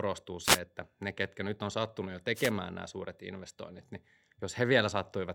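Two wireless microphone noise hits occur, at 0.42 to 0.60 s, just before "että ne ketkä nyt," and at 2.34 to 2.52 s, between "nyt on sattunut jo" and "nämä suuret investoinnit niin." Each time the FM radio link fades and receiver noise surges, giving a brief swish of static. On a spectrogram each appears as a broadband vertical smear, and on the waveform as a hiss-filled bulge.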